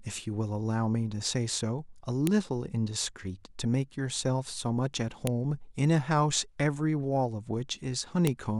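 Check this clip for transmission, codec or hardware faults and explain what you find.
One fault is present: file header played as audio, at 2.27, 5.27 and 8.27 s. The speech was joined from 3-second pieces whose WAV headers were left in, so those header bytes play as samples, giving a sharp, loud click at each join regardless of the speech.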